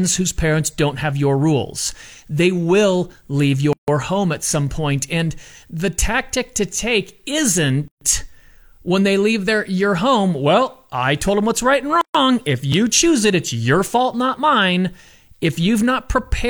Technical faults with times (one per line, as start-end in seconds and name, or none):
3.73-3.88 gap at a join of encoded pieces
7.88-8.01 gap at a join of encoded pieces
12.01-12.15 gap at a join of encoded pieces